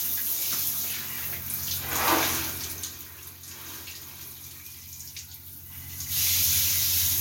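Nothing technical goes wrong anywhere in this sound, so there's nothing to flag.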